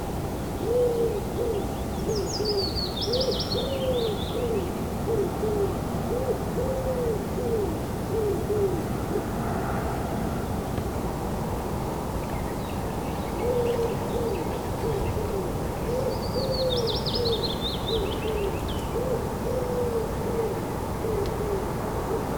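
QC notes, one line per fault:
Throughout, video or display buzz. A 60 Hz buzz with hash above it sits only about 10 dB below the sound. A screen or video cable is coupling into the audio.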